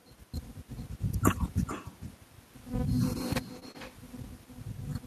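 Through the whole speech clip there is echo with no canceller. Each phrase returns roughly 0.4 s later as a fainter, thinner copy about 17 dB below the original. The far end's loudspeaker fed its microphone and nothing subtracted the signal. Unlike room reverberation, which blurs smoothly into the tail of each sound, this is a distinct delayed repeat, set apart by the network round trip, so the talker's own phrasing can be heard again shortly afterward.

A burst of damage follows between 3.55 and 3.76 s, where two kinds of packet fault alternate. From 3.55 to 3.57 s and again from 3.63 to 3.69 s is a lost packet rebuilt from error correction: about 20 ms and then 40 ms of audio, which points to one lost packet and then two in a row, were decoded from the low-bitrate copies carried in the following packets. Nothing drops out. The sound simply turns rougher and noisier for those instants.

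Right after each, from 3.59 to 3.63 s and from 3.71 to 3.76 s, is short concealed packet loss. About 20 ms went missing each time with no backup copy, so the decoder extended the preceding sound and then crossfaded back into the real signal. That gives a brief smear or wobble rather than the grainy but still genuine texture of the rebuilt frames, because what fills these gaps is guessed from the sound just before rather than decoded from a copy of the lost audio.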